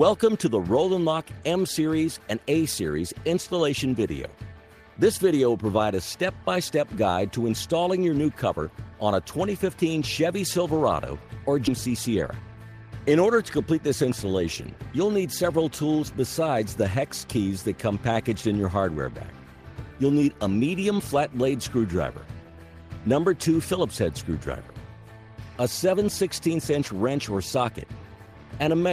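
At 11.67 s there's a skip ahead: roughly a fifth of a second of audio got dropped while later packets were already queued, so playback jumps straight forward with no gap at all, and the two sides of the cut butt right up against each other.

Right after, from 11.86 to 12.57 s, comes a jitter buffer speed-up. The buffer was running fuller than its target, so the receiver trimmed short pitch-period chunks, around 70 ms in total. Playback runs at 109% with pitch unchanged, which comes across as hurried.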